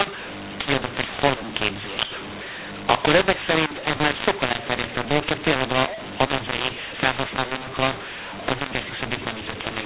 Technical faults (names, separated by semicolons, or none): mu-law and A-law mixed up